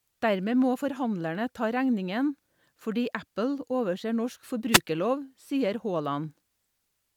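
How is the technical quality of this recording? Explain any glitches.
The recording has one glitch. From 4.71 to 4.80 s, a wireless microphone noise hit interrupts the speech. The radio signal from the FM microphone faded as reflections cancelled each other. Receiver noise rose. It sounds like a brief burst of static, about 90 ms long.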